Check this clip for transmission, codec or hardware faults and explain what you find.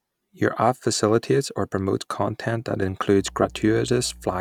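There's one fault here, a mains hum that comes in right after "or promotes content that", at about 3.18 s, and runs to the end at 4.41 s. It's a steady low 60 Hz tone sitting about 20 dB under the speech, beneath the voice. That's the power line leaking into the signal path, through a ground loop or a nearby transformer coupling in, which adds that fixed hum.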